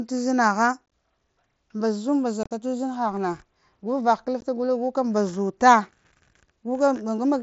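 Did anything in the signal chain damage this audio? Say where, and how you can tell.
Yes: unconcealed Bluetooth headset packet loss on the wireless headset link, with abrupt silent holes at 0.86–0.92 s, 2.43–2.51 s and 4.41 s. The pieces fit lost 7.5 ms packets left unfilled, whereas concealment would smear or repeat the gaps.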